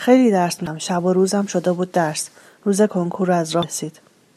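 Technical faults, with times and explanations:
0.66 s and 3.63 s: damaged data in a compressed stream. Corrupt frames knock the decoder out of sync, giving brief glitches.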